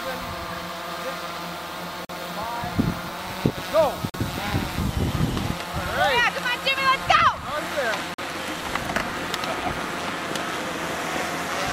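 At 2.05 to 2.09 s, 4.10 to 4.14 s and 8.14 to 8.18 s the audio stops for 44 ms of silence, a gap between chunks. The stream was delivered in pieces of about 4 s, and silence was inserted at each join rather than the pieces butting together. Unlike a dropout, nothing is missing. The sound resumes exactly where it broke off, so it is briefly interrupted, not cut.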